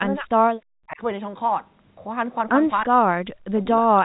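From 0.0 to 0.29 s, at 2.87 to 2.93 s and from 3.46 to 3.96 s the speech dips, by about 15 dB and then around 40 dB, likely speech suppressed in double talk. The waveform shrinks and the spectrogram thins to gaps.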